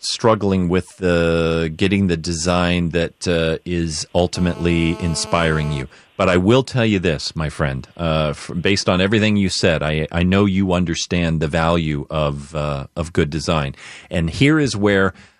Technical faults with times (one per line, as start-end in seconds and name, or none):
4.36-5.82 GSM phone buzz